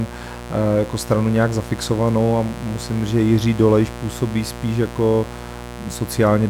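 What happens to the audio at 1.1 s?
At 1.1 s the speech sits on a mains buzz that runs unchanged from the first instant to the last. Sharp switching spikes from a dimmer, rectifier or unshielded lead enter twice per 60 Hz cycle, so the interference repeats 120 times a second and carries harmonics of 60 Hz up to several kHz. It sits roughly 15 dB below the speech. Its raspy, edgy texture and high harmonics set it apart from plain hum, which is a smooth, low, tonal drone.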